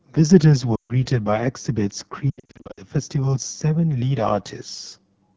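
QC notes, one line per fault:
throughout: AMR wideband (HD Voice) codec at 8.85 kbit/s, one of its two lowest rates. The pulse-driven vocal tract model has too few bits to track the speech accurately, so the voice sounds plainly rough and raspy, with a noise-filled sheen above 6.4 kHz.
0.76 to 1.06 s: lost AMR speech frames, about 140 ms of gaps, which fits seven 20 ms frames. The decoder repeats the last good pitch and vocal tract settings at falling gain, so the sound smears and briefly dips before recovering roughly.
2.30 to 2.80 s: lost AMR speech frames, about 340 ms scattered across 480 ms, with the longest run near 80 ms. The repeated concealment gives a stuttering warble with short fades, and the voice returns weak and rough after each gap.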